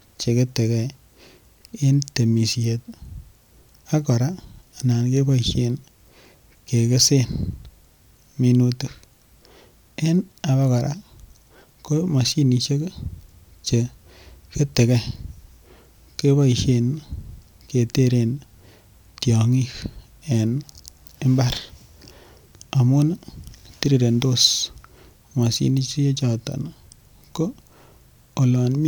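The speech recording shows no technical faults at any point, and its level, timing and continuity hold steady throughout.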